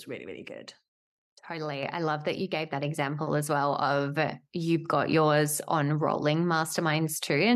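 At 1.83 s the call software stepped up the microphone volume, raising input gain by about 5 dB at once, so this speech and its background jump louder together just before "I love that you".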